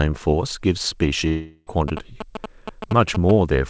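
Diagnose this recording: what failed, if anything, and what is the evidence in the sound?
A network stage failure, likely a long network dropout, interrupted the speech from 1.28 to 1.77 s. The receiver's concealment stretches the last sound into a fading buzz for about 0.39 s, then near-silence, and speech resumes with roughly 380 ms missing. The G.722 path, which fits 64 kbps, carries nothing above 8 kHz.

In the analogue wiring, a nearby 2G phone's GSM signalling bursts were rectified by the audio circuit. From 1.88 to 3.31 s a galloping dit-dit-dit of short 217 Hz buzzes rides over the speech, only about 5 dB below it.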